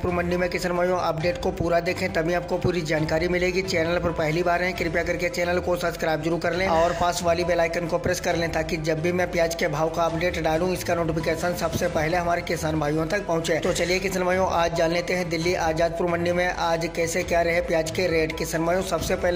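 No technical faults are audible anywhere in the recording.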